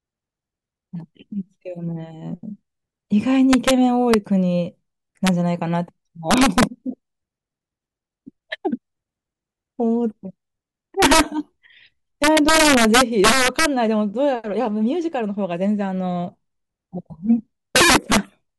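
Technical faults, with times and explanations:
3.53–3.71 s, 4.14 s, 5.27 s, 6.31–6.63 s, 11.02–11.20 s, 12.24–13.66 s, 17.76–18.17 s: integer overflow. Speech peaks exceeding full scale by about 1 to 7 dB wrap to the opposite sign instead of being limited, giving violent cracks far sharper than clipping's flattened buzz.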